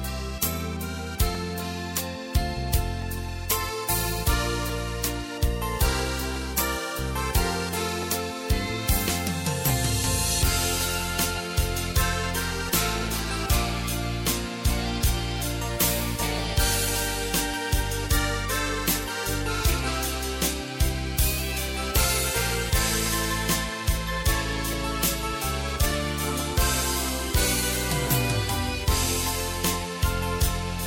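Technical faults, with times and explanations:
1.35–29.74 s, clock drift buffer slips: a click about every 1.67 s, likely two clocks a few hundred ppm apart, slipping a tiny sample block.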